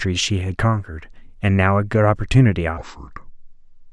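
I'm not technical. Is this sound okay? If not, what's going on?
No. From 2.78 s to the end at 3.92 s there's a wrong sample rate fault: the speech slows to about 0.69 times normal speed and drops about 6.5 semitones, sounding low and sluggish. This fits audio recorded at 32 kHz being played back at 22 kHz.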